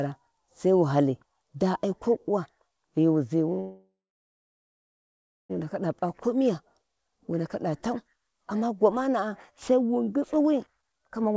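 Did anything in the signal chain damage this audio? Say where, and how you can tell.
Yes. At the network and jitter-buffer stage, a call audio freeze runs from 3.60 to 5.51 s. The last sound is stretched into a fading buzz or hiss, then about 1.55 s of silence. Speech resumes where it stopped, so the 1.9 s gap was inserted. Delayed packets likely starved the buffer.

In the jitter buffer, a jitter buffer speed-up from 10.67 s to the end at 11.36 s makes the speech hurried at unchanged pitch, running at about 138% speed. With more audio buffered than it aims for, the receiver cut roughly 0.3 s of pitch-period slices to shrink its delay.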